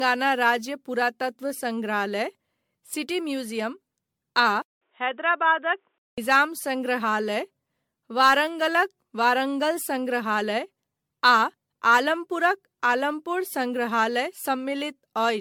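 Generation loss runs through the whole speech clip, likely from around ten successive MP3 encodes at a rate that fits roughly 97 kbit/s. Each pass requantises on a shifted frame grid, so artefacts stack into a swirly, hollow smear with softened attacks, and nothing remains above 19.9 kHz.

Input switched to a poorer device from 4.62 to 6.18 s, likely a change to a weaker microphone or headset call profile. A 195 ms silence marks the switch, then the band stops near 3.8 kHz, turning dull and boxy at unchanged level, over a faint noise floor about 50 dB down.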